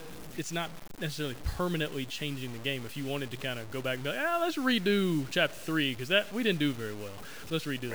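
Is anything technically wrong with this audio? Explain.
Yes. Throughout the speech there is grainy distortion that follows the signal, likely low bit depth without dither, consistent with about 6 bits truncated. Quiet passages sputter or drop out, error sits roughly 20 dB below the signal, waveforms show stair-steps, and spectrograms show signal-tracking noise.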